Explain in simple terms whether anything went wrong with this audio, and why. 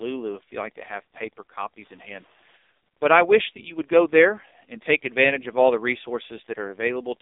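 The speech sounds thin, buzzy and robotic from start to finish, with nothing above about 3.8 kHz. That is the AMR narrowband mobile codec, the old phone-network speech coder, squeezing the voice hard into a few synthetic pulses per short frame.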